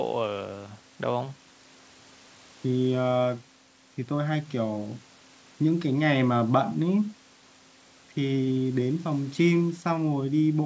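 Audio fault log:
No faults heard in this speech recording.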